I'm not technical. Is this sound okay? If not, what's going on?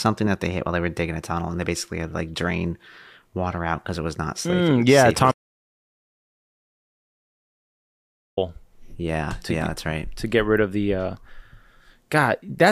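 No. From 5.32 s to 8.37 s the speech stops dead and about three seconds are replaced by total silence, not even background hiss. This is an audio dropout to silence, likely from the input briefly disconnecting or muting while recording continued. That speech is lost.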